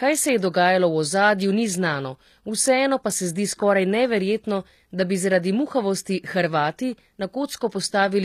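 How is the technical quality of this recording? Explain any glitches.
The speech has plainly audible codec damage from start to finish. Its treble sounds gritty, with s sounds turning metallic or lispy. The likely cause is HE-AAC compression at a rate that fits a 24 kbps stream. It rebuilds the highs by copying lower bands upward, so the harmonics no longer line up.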